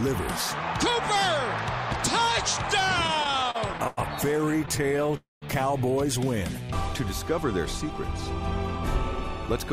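From 3.07 to 3.99 s and again from 4.41 to 5.15 s the audio suffers repeated stalls (stutter): fourteen brief hitches in each span, where packets arrived behind schedule and the last sound was stretched to fill the gap. The first span is rougher, with holds up to 95 ms covering about a quarter of it, while the second has only tiny holds of 14 ms or less. Nothing is lost, but the sound drags and judders in many short steps.

At 5.17 s a call audio freeze follows, likely caused by packets being held up in transit. Instead of many small hitches, there is one continuous hold of about 250 ms that trails off into roughly 170 ms of silence, then the sound picks up exactly where it stopped at 5.44 s.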